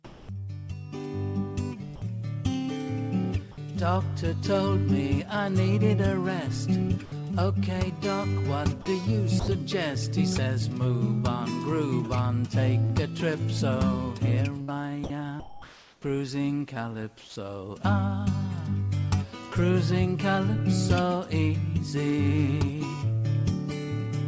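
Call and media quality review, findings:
Comfort noise in place of the background, 0.05–0.29 s: real background (about 22 dB below the loud passages) replaced for 240 ms by steady, featureless noise about 3 dB quieter. Likely discontinuous transmission at the sender, with the receiver synthesising shaped noise during the pause.

Sound dropped by the voice detector at 1.96–2.02 s, 8.82–8.86 s, 9.40–9.48 s and 17.20–17.36 s: sound gives way to flat noise for 60, 40, 80 and 160 ms respectively, with about 60 ms of actual sound lost in the last one. The sender's voice detector likely misread quiet sound as background and stopped sending, and comfort noise filled in.

Short concealed packet loss, 12.86–12.92 s: brief smear where 40 ms of audio missed the decoder. The receiver extended the preceding sound across the gap, then blended back into the real signal.

Sound chopped by the voice detector, 14.62–16.04 s: choppy sound, with about 763 ms in total replaced by comfort noise. 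Likely the sender's detector toggling repeatedly between sending and muting. The call path band-limits to nothing above 8 kHz, which fits G.722 at 64 kbps.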